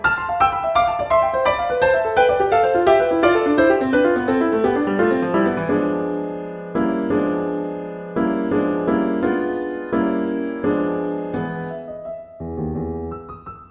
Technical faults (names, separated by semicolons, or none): none